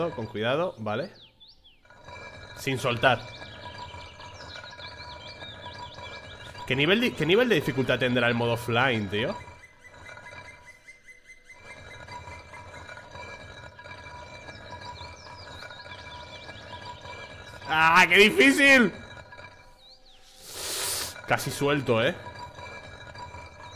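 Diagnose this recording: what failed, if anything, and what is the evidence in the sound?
No failure shows up at any stage of the chain, from analogue input through conversion, buffering, processing, transport and playback, and there is nothing in the sound to point to one.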